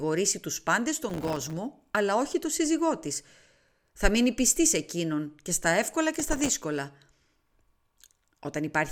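Speech with processor overload crackle from 1.08 to 1.53 s and 6.14 to 6.60 s, where dozens of missed deadlines on very short buffers, around 1.5 ms, leave hard-edged silent gaps.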